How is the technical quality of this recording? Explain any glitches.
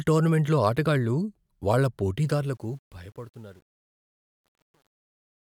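The technical quality is compromised by truncation distortion on a fade. From 2.2 s to the end at about 5.5 s, right after "టోర్నమెంట్లో ఆటగాళ్ళు వాళ్ళ", the fade-out is computed at too coarse a resolution and without dither, which fits roughly 9-bit output. As the level drops, the speech waveform collapses into a few square steps. From 2.93 s onward the tail sounds gritty instead of thinning out evenly.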